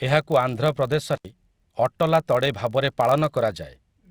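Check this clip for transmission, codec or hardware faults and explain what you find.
Two faults are present in this speech clip, one continuous and one brief.

Throughout, a filter is restarted on every block. It discards its memory at each block boundary and starts again from silence, so each block opens with a small transient. These repeat as a buzz near 46.9 Hz, which fits a 1024-sample block, and the buzz rises and falls with the speech level.

From 1.15 to 1.25 s there is an intermittent contact. A loose connection briefly breaks the signal path, and the audio drops out for about 71 ms, with crackle at the moments the contact opens and closes and faint hiss left in the gap.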